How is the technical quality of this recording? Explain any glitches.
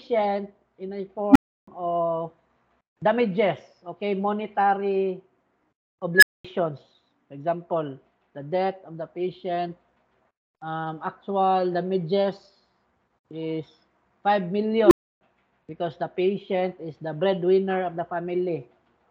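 The recording is marred by three bursts from an unstable filter, at 1.30 to 1.68 s, 6.16 to 6.44 s and 14.84 to 15.21 s. Each time a recursive filter's feedback runs away: a tone (around 300 Hz, then near 1.5 kHz, then around 400 Hz) swells over 51, 68 and 74 ms into a loud clipped squeal, then overflows and drops out for 320, 220 and 300 ms. A waveform shows a fast-growing envelope flattened where it clips, then a flat gap. A spectrogram shows a bright horizontal line ending in a blank band.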